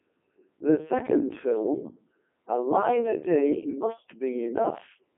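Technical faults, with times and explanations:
Throughout: Codec 2 vocoder at 3.2 kbit/s; speech is resynthesised from pitch, voicing and spectral envelope as sine waves, so it sounds robotic and buzzy, confined to roughly 200 Hz–3.4 kHz.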